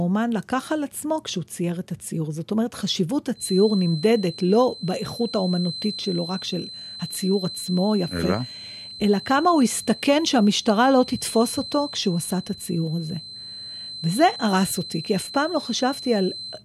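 A loudspeaker-to-microphone loop most likely held at the edge of feedback from 3.33 s to the end of the clip, so a single frequency kept recirculating without building into a full howl. The result is a feedback whistle: a thin, steady tone near 4.1 kHz sitting behind the speech, some 15 dB quieter than it, swelling and fading slowly in level.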